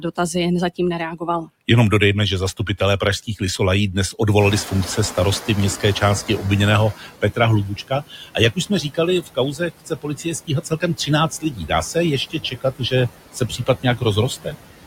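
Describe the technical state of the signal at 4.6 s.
At 4.6 s the noise suppressor is catching up. The room noise has jumped by about 19 dB at around 4.5 s, ending up about 15 dB below the speech. The suppressor's noise estimate, built on the quieter background before the jump, lags behind. So the louder noise passes with too little reduction, and its level audibly sinks as the estimate adapts over about 2.55 s, from 4.39 s to 6.94 s. The reduction during this span reaches about 13 dB.

Noise suppressor artifacts are also present at this moment, as they are across the whole clip. The suppressor works frame by frame, attenuating each band it judges to be steady noise by about 17 dB. This makes the background dip between phrases and come back up under the speech. Here that processing runs on top of the lagging estimate.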